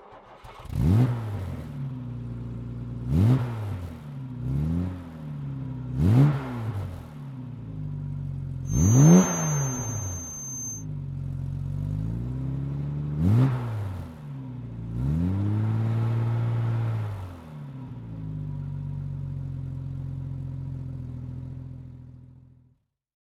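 From 8.62 s to 10.86 s, a feedback whistle sits behind the sound. It is a thin, steady tone at 6.3 kHz. It stays about 10 dB below the main sound and swells and fades slowly in level. It never builds or runs away. The likely cause is a loudspeaker-to-microphone loop held just at the edge of feedback. At that point one frequency keeps ringing on its own.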